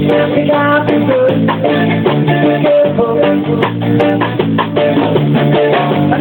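Gain pumping runs throughout: the gain swings by around 10 dB under loud sounds, likely a fast limiter fighting excessive input gain.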